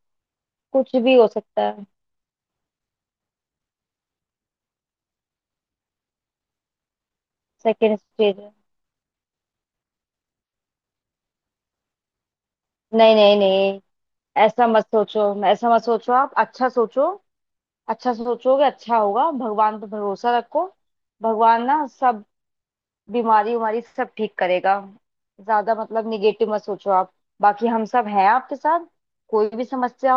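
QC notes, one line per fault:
Nothing stood out on listening to the speech in this clip.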